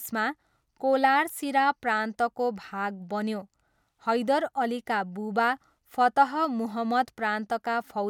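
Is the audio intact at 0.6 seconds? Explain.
Yes, the speech is intact at 0.6 seconds, with no fault audible at that moment.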